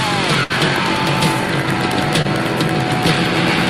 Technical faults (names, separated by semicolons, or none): burst of packet loss; short concealed packet loss